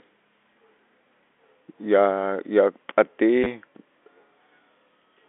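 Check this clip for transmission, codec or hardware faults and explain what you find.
One transmission fault stands out. From 3.44 to 3.46 s the speech gives a brief robotic stutter. This is packet loss with the last packet repeated: about 20 ms of audio went missing, which fits two lost 10 ms packets, and the receiver replayed the previous packet. The narrow telephone band of the G.711 coding can be heard throughout.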